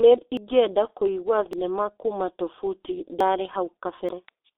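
Throughout, the speech has passed through a G.723.1 codec. Its low bitrate, which fits roughly 6.3 kbit/s, and slowly updated voice model leave nothing above 4 kHz and heavy damage, so the speech sounds muffled and hoarse, with smeared consonants.

At 0.37, 1.53, 3.20 and 4.09 s, the sound jumps ahead with no gap, losing around a tenth, a twentieth, three twentieths and a twentieth of a second respectively. The likely cause is a dropped buffer (overrun), with unread samples overwritten and the remaining audio spliced together.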